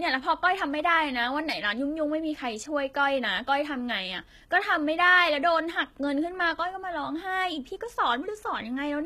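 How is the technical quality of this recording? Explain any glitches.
Quality's noticeably compromised throughout this speech clip. The s sounds come out gritty and lispy, with nothing above 14.9 kHz, likely HE-AAC compression at a low bitrate, maybe around 20 kbps, rebuilding the treble from copied lower bands.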